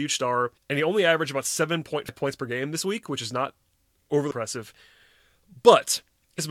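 At 0.56, 2.08, 4.30 and 6.38 to 6.40 s the speech lurches forward as compressed frames are skipped, losing roughly 0.15 to 0.3 s each time.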